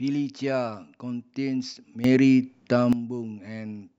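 Speech, with a sudden gain jump from 2.04 s to 2.93 s. The level rises by about 11 dB at once, and the background noise rises with it. Then both drop back. A gain setting likely switched between samples without any ramp.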